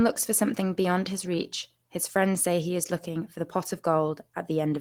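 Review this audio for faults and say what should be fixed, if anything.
No technical faults turn up anywhere in this speech recording, so nothing here needs fixing.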